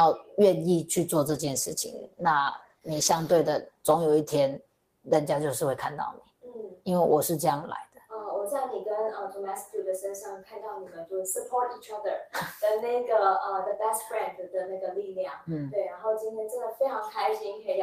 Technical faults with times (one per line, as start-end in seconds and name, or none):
1.30-5.17 call bitrate drop